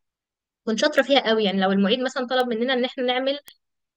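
At 0.99 s, 2.40 s and 3.48 s the speech carries a bit error spike, each a single sample that leaps to about -11 dBFS and drops straight back. One flipped bit in memory or on a digital link pushed the value by a power of two, so each is heard as one sharp broadband tick with no relation to the voice. Unlike a dropout click or a clipped peak, nothing is missing or flattened around it, and the tick is gone within the one sample.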